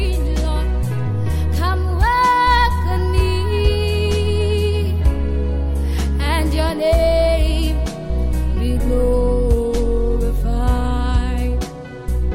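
No technical faults are audible anywhere in the recording.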